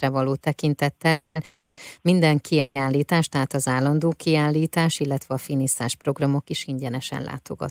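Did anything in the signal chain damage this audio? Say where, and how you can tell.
Yes: call audio freeze at 1.11–1.37, 1.45–1.79 and 2.59–2.77 s (before "tehát az állandó kiállítás"), likely network delay emptying the jitter buffer. The spectrogram shows smeared, fading buzz bands where the last sound is stretched, then speech resumes intact but later.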